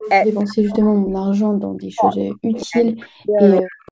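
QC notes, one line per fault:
0.0–0.1 s, 0.76–0.85 s, 2.13–2.66 s, 3.48–3.91 s: echo leak. The far end's echo canceller likely let part of its loudspeaker pickup through, so a faint copy of the sound returns about 176 ms late, roughly 15 to 25 dB below the main level.
0.41–1.19 s, 1.75–2.16 s, 2.67–3.71 s: speech suppressed in double talk. With both sides active, the echo canceller likely mistook the talker for echo and clamped down, so the speech dips by as much as about 40 dB during these spans.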